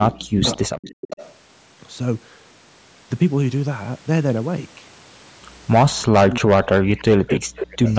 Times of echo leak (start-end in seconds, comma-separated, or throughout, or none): 0.12-1.35, 6.00-6.04, 6.67-7.04, 7.56-7.93